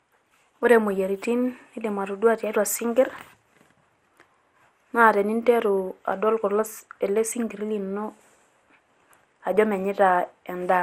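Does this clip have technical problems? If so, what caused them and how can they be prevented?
Yes. Generation loss runs throughout: swirly, hollow speech, blurred attacks, nothing above 16 kHz. This was likely caused by about ten MP2 re-encodes, consistent with 96 kbit/s. To prevent it, edit from a lossless master and encode once.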